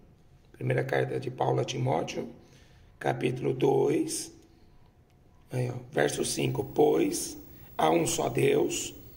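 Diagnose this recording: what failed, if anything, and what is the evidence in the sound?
Video or display buzz entered through the analogue wiring: a screen or video cable coupled its picture signal into the audio path. From 6.07 s to the end, a buzz at the 59.94 Hz field rate appears with hash riding above it, plus a high whine at the 15.7 kHz line rate. It sits roughly 25 dB below the wanted sound.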